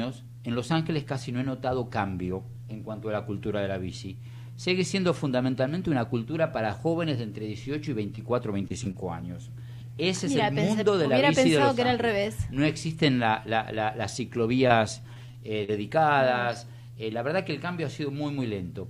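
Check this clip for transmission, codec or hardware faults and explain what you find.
Two transmission faults are audible, both from lost packets that the receiver patched over.

Short concealed packet loss occurs at 8.15, 8.68, 8.84, 8.91 and 14.68 s. Each time about 20 ms failed to arrive, and the decoder extended the preceding sound before blending back. The result is a brief smear or wobble.

Repeated packet loss (robotic sound) runs from 15.14 to 15.70 s. Four gaps fall close together, the longest 41 ms, with about 100 ms missing in all. Roughly a fifth of the stretch is concealed. Because each patch is followed by another, the sound turns choppy rather than showing one brief blip.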